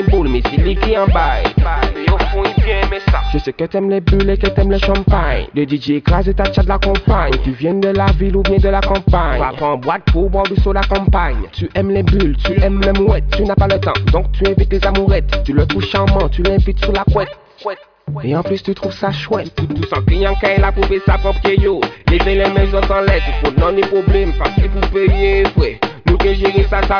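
Nothing in this one trips any alarms, since there are no technical faults to point to anywhere along the way.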